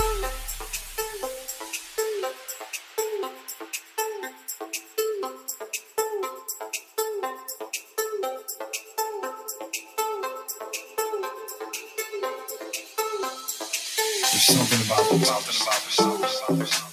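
The audio has a noise suppressor designed for speech running on material it was not built for. It treats steady content and decaying tails as noise and pulls them down, while sharp onsets pass, so the level swings by around 10 dB and the sound pumps and thins where sustained parts should hold. The clearest instance of sound cut by the noise suppressor is a long stretch from 0.53 to 5.98 s, where roughly three seconds in total are attenuated by as much as about 9 dB. After that, shorter cuts of about a sixth to a fifth of a second recur at 6.78 to 6.98 s and 7.81 to 7.98 s (about 9 dB), 8.81 to 8.98 s and 9.83 to 9.98 s (about 7 dB), and 10.82 to 10.98 s and 12.83 to 12.98 s (about 6 dB).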